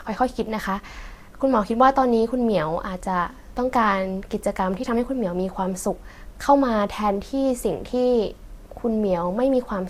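At 7.50 s the speech jumps forward: around 20 ms is gone, and the two sides meet directly with no gap. This is audio missing between chunks, likely lost as one 4-second chunk closed and the next opened. A dropout would leave silence instead.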